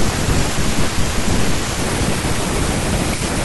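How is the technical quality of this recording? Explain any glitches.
The recording has one clear glitch: from 1.79 s to the end at 3.45 s, a section at the wrong speed. The speech suddenly runs 1.33 times too fast and rises about five semitones, likely from playback on a mismatched clock. Because tempo and pitch jump together, it is a speed error rather than a pitch shift, which would keep the timing unchanged.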